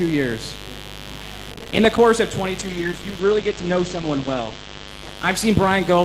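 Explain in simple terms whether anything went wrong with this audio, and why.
A mains buzz runs under the whole clip. It is a steady, raspy hum tied to the 50 Hz power supply. Sharp electrical spikes leak into the audio twice per power cycle. Their echoes climb high into the treble, so it sounds gritty rather than smooth.

From 1.53 to 1.98 s there is processor overload crackle. The computer fell behind. It missed about twenty small audio deadlines over and over, each roughly 5 ms long, and each miss left a tiny silent gap. Those hard little holes join into a burst of crackle.

From 2.64 s to the end comes a call bitrate drop. The call decided its connection had weakened, so it squeezed the audio much harder. The sound turns rough and muffled, with the treble cut from about 20 kHz down to 8 kHz. It stays at its worst for about two seconds.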